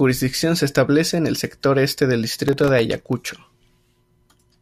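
From 2.48 to 3.61 s, after "el sector este del", processor overload crackle sets in. About thirty sub-millisecond buffers miss their deadlines, each leaving a hard-edged silent gap.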